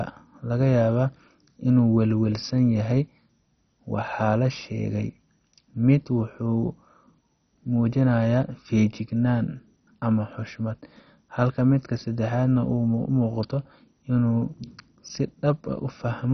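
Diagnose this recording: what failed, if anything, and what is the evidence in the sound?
Codec stage: the speech throughout is dull, with nothing above 6.1 kHz, and carries a heavy gurgling, granular distortion. That points to likely MP2 compression at a very low rate, around 32 kbps, where upper sub-bands are dropped and the remaining bands coarsely quantised.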